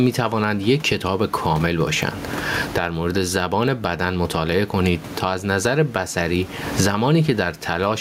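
Gain pumping runs through the whole speech clip. The room noise, sitting about 30 dB below the speech, is part of the recording, with the gain moving by something like 25 dB between gaps and loud passages. The likely cause is input gain set far too high, with a fast limiter or compressor clamping down on each loud sound, squashing loud and soft parts toward one level.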